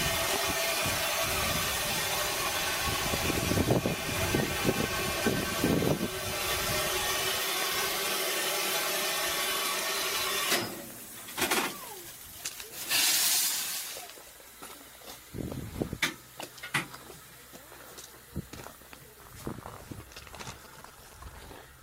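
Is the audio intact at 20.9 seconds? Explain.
No. From 20.65 to 21.37 s a galloping dit-dit-dit of short buzzes sits about 20 dB below the main sound, the buzzes pitched at 217 Hz. This is GSM signalling bursts: a nearby 2G phone, here in a signalling state, transmits brief groups of radio pulses at 217 Hz. The audio circuitry rectifies that radio energy, turning the pulse envelope into audible clicks and buzz.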